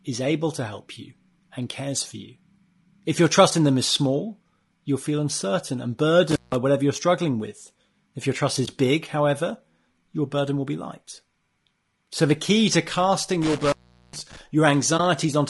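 Speech throughout sounds rough and grainy, with noise filling the gaps between harmonics and a thin, synthetic top band, likely low-delay AAC compression (AAC-ELD) at a low bitrate around 32 kbps. Intermittent contact cuts the sound at 6.31 to 6.55 s, with the line open for about 0.17 s, and at 13.42 to 14.41 s, open for about 0.41 s. Crackle marks the edges of each dropout. AAC frame loss with muting leaves shorter, brief dips of about 20 ms at 8.65 s and 14.97 s, consistent with a single lost frame each time. Unlike the contact dropouts, these dips fade out and back in.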